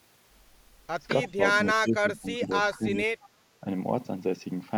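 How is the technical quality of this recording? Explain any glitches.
The recording has two stretches of speech suppressed in double talk, from 1.76 to 2.51 s and from 2.72 to 3.12 s. The level sags by roughly 15 dB and then 10 dB, likely because an echo canceller mistook overlapping far-end sound for echo and attenuated the near talker.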